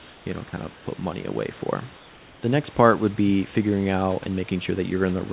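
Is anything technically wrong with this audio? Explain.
Yes. The room background drops out in three pauses and is replaced by comfort noise: from 0.00 to 0.26 s before "you know kind", from 0.74 to 0.86 s between "you know kind" and "money away", and from 1.97 to 2.42 s. This is likely discontinuous transmission. The sender stops sending during silence, and the receiver fills the gap with synthetic noise. That noise is steady, featureless and about 2 dB quieter than the real room noise. On a spectrogram these stretches look like smooth, uniform texture. The waveform shows a slight step down in the noise floor. The call path is band-limited, with nothing above 4 kHz, which fits a G.711 telephone-band codec.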